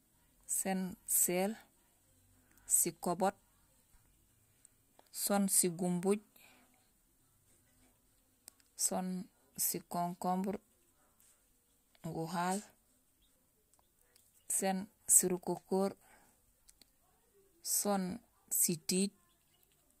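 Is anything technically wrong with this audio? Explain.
Yes. There are clock slip clicks running from about 0.16 s right through to about 19.96 s: a steady, soft rattle of ticks roughly every 70 ms, a few hundred in all, riding on the speech and dropping out in the gaps. The likely cause is two devices on free-running clocks that disagree by something like 300 ppm, so a single sample gets dropped or repeated each time the drift adds up to one whole sample.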